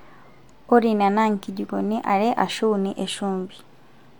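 Speech, with no technical faults.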